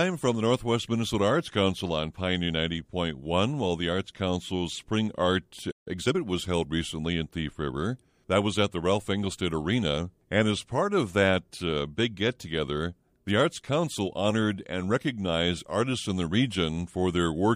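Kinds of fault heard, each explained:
Playback stall: The player most likely ran short of buffered data or had its output thread held up, so nothing reached the output for a moment. In this speech the sound cuts out in mid-flow at 5.71 s and stays silent for about 149 ms, resuming at 5.88 s. It picks up from where it stopped rather than skipping ahead, so the gap reads as a sudden hole in the delivery.
Time-compressed catch-up: Once the output resumed, the player worked off the backlog built up during the stall by removing short slices of audio and cross-fading across the joins. From 5.88 s to 6.16 s the speech runs at about 1.5 times normal speed while keeping its pitch, giving a rushed quality. It settles back to normal pace just before "was held recently in".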